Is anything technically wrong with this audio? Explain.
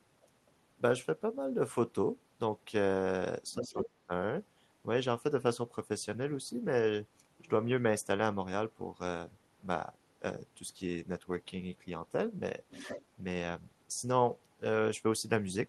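Yes, there are two related problems, both around the echo handling on the call.

First, the other side's voice leaking through, from 3.52 to 3.86 s and again from 12.7 to 13.05 s. A second, fainter voice sits under the main talker, about 15 dB down the first time and closer, about 10 dB down, the second. The likely cause is a loudspeaker on the talker's end feeding back into the mic, with the echo canceller leaving some of it behind.

Second, speech suppressed in double talk, from 3.61 to 4.11 s, overlapping that first leak. With both people talking at once, the talker's own voice gets ducked hard, dropping by about 30 dB at its deepest, over roughly 0.3 s in total. It's most likely the canceller failing to tell the near voice from the echo and clamping both down together.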